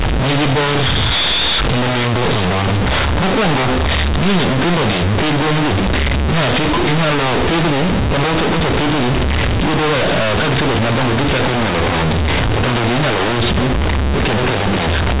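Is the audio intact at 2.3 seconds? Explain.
No. At 2.3 seconds, as across the whole clip, the speech is very loud and harshly buzzy, with heavy noise filling the pauses. This is companded audio read as linear: A-law telephone bytes are played as plain 8-bit samples without expansion, so every sign change swings across half the range and quiet sounds come out as loud as loud ones.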